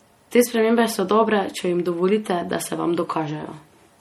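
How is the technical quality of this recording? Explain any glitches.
The quality is dragged down by codec damage across the whole thing. The MP3 compression artefacts run start to finish: the speech sounds watery and swirly, with chirpy s sounds, likely from a starved encoder, which fits roughly 48 kbps.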